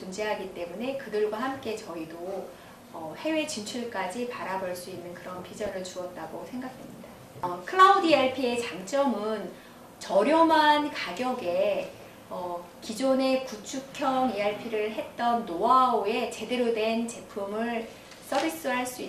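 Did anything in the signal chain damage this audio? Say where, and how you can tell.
Yes. The whole clip sounds dull and gurgly, with grainy, coarsely quantised highs and upper bands that seem to drop in and out. That's likely MP2 compression at the codec stage, and the amount of damage points to a bitrate around 80 kbps.

There's also a short burst of DAB burbling from 5.56 to 5.71 s, a burbling smear lasting about 150 ms. That fits a handful of corrupted frames, roughly eight, where bit errors on the transmission side got past error correction and put short blips of noise into individual sub-bands.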